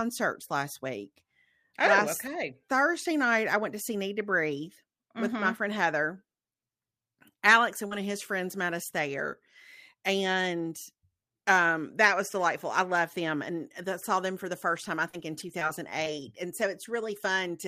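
Around 7.87 to 8.02 s, just before "his friends met us", short concealed packet loss dropped about 40 ms of speech. The receiver extended the preceding sound, leaving a brief smear.

Within that stretch, at 7.91 to 7.93 s, a lost packet was rebuilt from error correction. Its low-bitrate copy plays back as 20 ms of rougher, noisier sound.

From 14.75 to 16.24 s, between "saw them for the" and "and so", packets went missing or late several times, producing scattered short gaps. About four small holes, the longest around 40 ms, were patched over, heard as ticks and hiccups.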